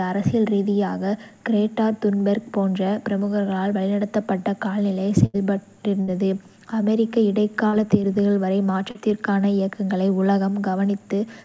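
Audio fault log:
5.26–5.36 s, 6.02–6.09 s and 7.67–7.75 s, burst of packet loss: each time the speech stalls into a brief held tone or hiss that dies away, then jumps ahead with a piece missing, about 80 ms at the first point and about 60 ms at the other two. Several consecutive packets failed to arrive in time. The receiver extended the last received sound while lowering its level to cover the gap (roughly 77, 57 and 54 ms), then resumed on live audio, leaving the skipped stretch unheard.
8.91–8.97 s, short concealed packet loss: a quick smear or wobble in the speech, barely a syllable's fraction, where about 40 ms never reached the decoder in time. The receiver patched the hole by continuing the preceding sound, following its pitch if voiced or substituting shaped noise if not, for about 39 ms, then crossfaded back into the real signal. The fill takes on the band-limited sound of the call path, with nothing above 8 kHz, which fits a G.722 wideband codec.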